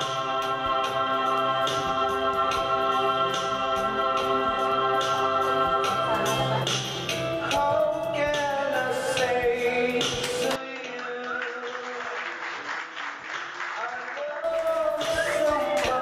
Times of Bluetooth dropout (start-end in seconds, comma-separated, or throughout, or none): none